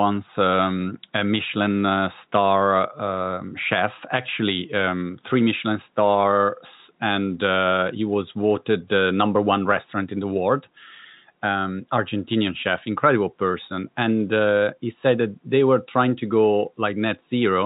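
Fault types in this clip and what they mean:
No faults heard in the speech; room noise sits about 46 dB below it, and the telephone-band coding shows no more than faint damage.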